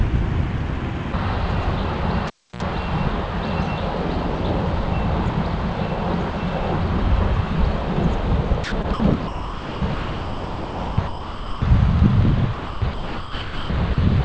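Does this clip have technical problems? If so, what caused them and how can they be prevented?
Yes. From 2.27 to 2.63 s a cable is pulled and plugged in: a pop, about 0.3 s of near silence, a 68 ms burst of 60 Hz mains buzz as the plug tip makes contact, then a second pop. The buzz and paired pops distinguish it from a network dropout. Secure connectors and never replug live lines.

From 8.64 to 9.00 s, 9.28 to 11.62 s and 12.54 to 13.98 s, the sound is chopped, likely by the voice detector. Stretches of about 0.16 s, 2.1 s and 1.1 s are replaced by smooth synthetic comfort noise, not by garbled or repeated fragments as with packet loss. Lowering the detection threshold or disabling voice detection prevents it.

Throughout, the call path passes nothing above 8 kHz, which fits a wideband G.722 link.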